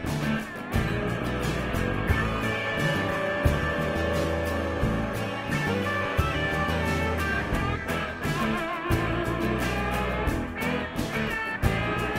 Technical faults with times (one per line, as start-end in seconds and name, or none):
0.94-9.01 call bitrate drop